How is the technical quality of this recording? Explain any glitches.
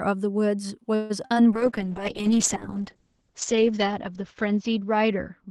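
The recording has two kinds of call glitch in its first second and a half, and a quality drop that lasts to the end.

From 0.95 to 1.12 s the speech stalls: the last sound is drawn out into a fading buzz or hiss for about 144 ms, then the speech resumes exactly where it left off with nothing skipped. This is a call audio freeze, likely caused by packets being held up in transit so the jitter buffer ran dry. The receiver kept extending the final sound until fresh audio arrived, which pushed everything after it later by the same 144 ms.

Shortly after come two brief smears at 1.26 to 1.32 s and 1.34 to 1.38 s, each a quick wobble or blur rather than a clean gap. These are short concealed packet losses: about 40 ms and then 20 ms of audio never reached the decoder in time. The receiver papered over each hole by continuing the preceding sound and blending back into the real signal, so a short consonant could be lost.

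From 1.52 s to the end the speech turns rough and watery, and audibly duller. This is a call bitrate drop. The Opus encoder had been running at 64 kbps with audio up to 12 kHz, but it was pushed down to 7 kbps. It sat at that floor for about 1.9 s. At that rate the coding is much coarser and the top of the spectrum is cut back to 8 kHz, which removes the brightness of sibilants.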